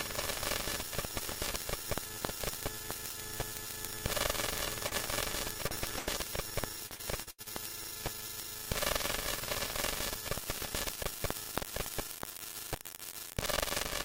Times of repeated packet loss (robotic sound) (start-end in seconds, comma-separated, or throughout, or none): 6.86-7.53